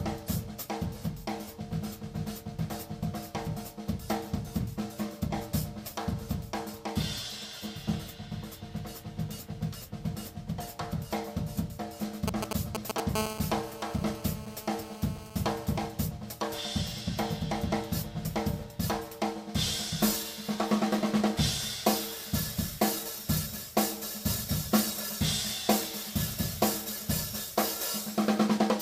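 From 12.28 to 13.00 s, GSM signalling bursts break in. A nearby 2G phone is exchanging short groups of radio bursts, and the audio circuit rectifies them. The result is a galloping dit-dit-dit of brief 217 Hz buzzes, roughly as loud as the audio itself.

At 13.15 s the GSM phone buzz begins and runs to 15.86 s. The phone is now in a call, transmitting bursts 217 times a second. Rectified, these give a hard, raspy 217 Hz buzz rich in harmonics, unrelated to the sound, about 9 dB below it.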